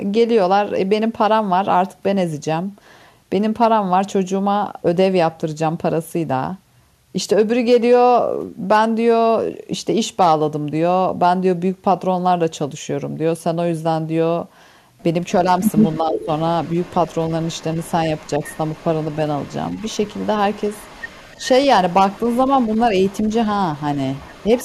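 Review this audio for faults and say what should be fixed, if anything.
Echo leak: the far end's echo canceller likely let part of its loudspeaker pickup through and sent it back. From 15.62 to 21.48 s, 21.89 to 23.35 s and 23.75 to 24.64 s, a faint copy of the speech trails by about 310 ms, around 30 dB down, rising to about 25 dB down in the last stretch.

Speech suppressed in double talk: with both sides talking at once, the echo canceller likely could not separate the local talker from the loudspeaker echo and turned everything down. From 16.0 to 16.28 s the speech dips by roughly 10 dB.

Better echo cancellation with proper double-talk detection, or a headset on the loudspeaker side, would prevent both.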